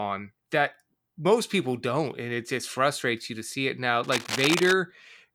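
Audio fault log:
4.04–4.73 s, cable scratch noise: just after "to see it now", a worn cable, connector or control carrying a DC voltage was likely moved, so its contact resistance jumped about rapidly and fed irregular bursts of noise into the signal path. The result is a dense, uneven scratching and rustling laid over the speech for about 0.7 s, sitting only around 5 dB below the speech level, so it competes clearly with the sound beneath it.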